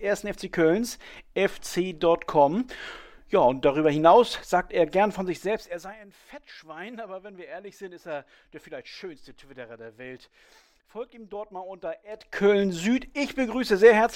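Between 12.06 and 12.46 s, a level change of roughly 20 dB produces zipper noise. The gain jumps in 1 dB steps about a hundred times a second without smoothing, which gives a rapid ticking buzz. The waveform envelope forms a staircase, and the spectrogram shows faint vertical click lines.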